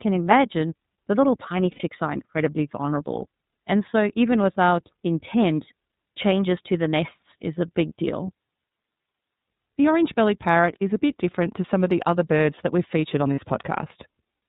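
Throughout, the speech sounds band-limited, slightly rough and synthetic, with nothing above 4 kHz, which fits the iLBC codec at its 13.33 kbps, 30 ms-frame mode. From 1.71 to 1.83 s, and again from 13.35 to 13.41 s, the sound briefly turns into a held, buzzy vowel. These are lost iLBC frames, about 90 ms and 30 ms of missing audio, which the decoder filled by repeating the last pitch cycle mixed with noise.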